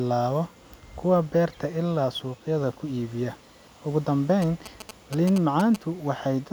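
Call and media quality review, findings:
GSM signalling bursts, 4.42–5.76 s over speech. Galloping ticks and short 217 Hz buzz, roughly 10 dB below signal. Nearby 2G phone signalling; audio circuit rectifies its radio bursts.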